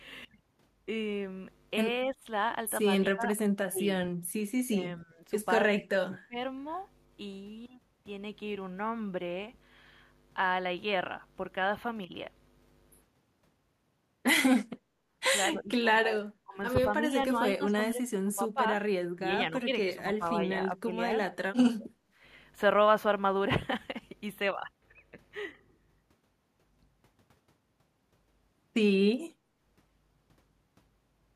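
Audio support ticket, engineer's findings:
Speech suppressed in double talk at 2.11–2.23, 3.14–3.86, 4.69–5.24, 5.79–6.37, 15.53–18.62, 19.15–20.9 and 21.45–21.91 s. Near-end speech ducks by about 15 to 30 dB and breaks up. Likely echo-canceller suppression during overlap.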